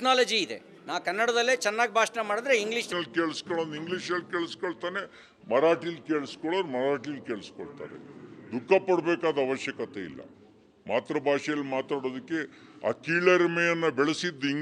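From about 2.92 s right through to the end, the audio drops into a section at the wrong speed: it plays at roughly 0.75x, so everything turns slower and deeper together, about five semitones down. Because pitch and tempo shift as one at that instant rather than drifting, it's most likely a resampling slip, with that stretch clocked at the wrong rate by an editor or player. The first few seconds sound right.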